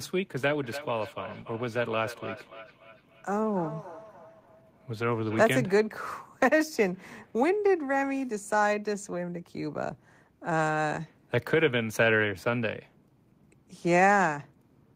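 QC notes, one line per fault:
0.63–5.55 s, feedback echo between two devices: speech returns about every 300 ms, up to about 16 dB below the voice. A second device replays the microphone's signal back into it.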